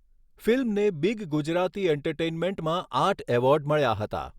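The speech signal stays technically intact throughout, with nothing audible that points to a fault anywhere in the recording.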